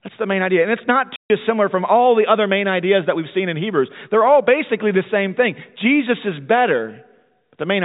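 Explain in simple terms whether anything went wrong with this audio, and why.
Packet loss filled with silence at 1.16–1.3 s: a 140 ms chunk of speech never arrived, so the receiver played silence, leaving a hole with hard edges.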